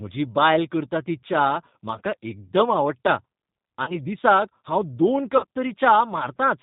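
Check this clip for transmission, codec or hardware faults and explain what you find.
Two faults are present: G.729 codec coloration through the whole speech clip, and two short stretches of VoIP packet loss concealed by the speech codec.

The G.729 codec damage is plainly audible from start to finish. The coder rebuilds the voice from a vocal tract filter, a pitch predictor and a few pulses per frame, at a rate that fits 8 kbit/s G.729A. This makes the speech sound rough and slightly synthetic. A spectrogram shows nothing above 4 kHz and smeared, blocky harmonics.

VoIP packet loss concealed by the speech codec occurs from 3.84 to 3.99 s and from 5.37 to 5.45 s. The missing audio runs about 30 ms in the first case, which fits one lost packet, and about 60 ms in the second. In each gap the decoder extends its last pitch and filter at falling gain, giving a brief stretched sound that fades. 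On a waveform this looks like a repetitive, decaying envelope. On a spectrogram it appears as frozen horizontal harmonics that stay weak briefly after the sound resumes.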